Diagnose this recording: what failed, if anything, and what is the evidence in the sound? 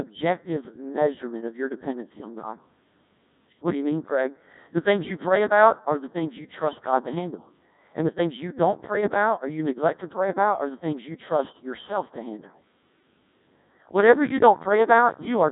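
The failure is at the codec stage: the speech has passed through a Codec 2 vocoder for the whole clip. The voice sounds robotic and buzzy throughout, with nothing above about 3.8 kHz, and the damage is heavy, which fits the 1.6 kbit/s mode. The decoder rebuilds speech from sine waves driven by pitch, voicing and envelope parameters, so the original waveform is gone. A telephone band-limit would only dull the sound, but this one is resynthesised, not filtered.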